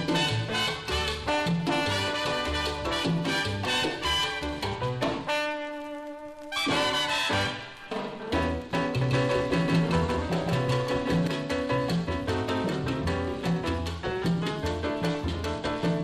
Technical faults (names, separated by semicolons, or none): doubled audio track